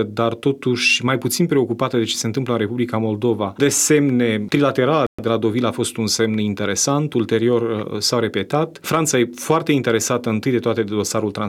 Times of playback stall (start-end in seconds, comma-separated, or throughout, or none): 5.07-5.19